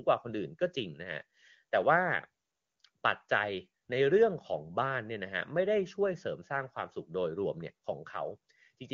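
No faults detected; the speech runs through AMR wideband (HD Voice) coding at what sounds like its top rate, with no audible defect at any point.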